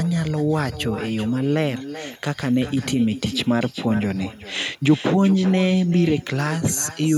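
Speech runs throughout, and every phrase is followed by a quieter, thinner copy of itself. The fault is echo with no canceller, present for the whole clip. The repeat arrives roughly 0.4 s after the original and sits about 14 dB below it. The far end is playing the call through a loudspeaker. Its microphone picks that sound up, and nothing removes it before it returns over the network.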